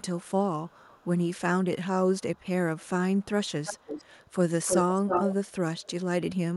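Echo leak occurs at 0.2–0.31, 0.68–1.3, 2.19–2.44, 2.78–2.89, 3.17–3.26, 3.45–4.33, 4.66–5.52 and 5.78–5.91 s. A delayed copy of the speech trails by 371 ms, then 320 ms. It is faint at first, reaches about −10 dB at 3.45 s and about 0 dB at 4.66 s, and is likely left by a loudspeaker-side echo canceller. Spectrograms show time-shifted duplicate harmonic bands.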